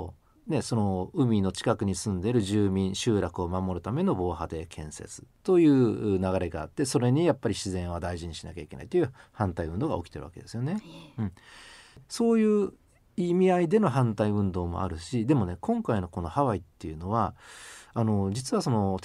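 The signal stays steady and continuous throughout, with no technical faults audible at any point in the recording.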